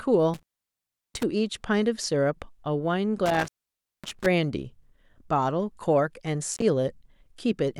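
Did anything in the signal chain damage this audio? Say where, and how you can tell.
Yes: the speech drops out with crackle at the edges at 0.34–1.23 s, 3.26–4.26 s and 6.54–6.62 s. This is intermittent contact in the analogue wiring, where a loose cable or plug briefly opens.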